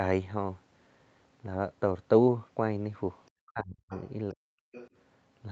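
From 3.32 to 3.91 s the talker's voice gets pushed way down, roughly 40 dB at its deepest, in pieces adding up to about half a second. It sounds like speech suppressed in double talk, likely the echo canceller mistaking the talker for loudspeaker echo while both sides were talking and clamping down on everything. At 3.89 to 4.10 s a faint second voice comes through, roughly 20 dB under the main speech. That's the other side's voice leaking through, likely far-end audio from the loudspeaker that the echo canceller didn't fully strip from the mic. The same suppression hits again at 4.34 to 4.48 s, about 150 ms of heavy dropout, and a second scrap of the other side's voice leaks in at 4.72 to 4.89 s, again quiet. Through all of it the top end stops around 8 kHz, which fits the call's Opus path at its normal bandwidth.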